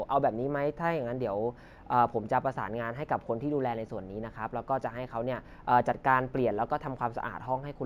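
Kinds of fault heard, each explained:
Imaging from linear upsampling: the speech was raised to a higher rate by straight-line interpolation, which fits a 16 kHz source converted to 44.1 kHz. The top is dulled, and a faint mirrored copy of the spectrum, roughly 45 dB down, sits between 8 and 16 kHz, giving sibilants a light metallic shimmer rather than the clean cut-off of plain band-limiting.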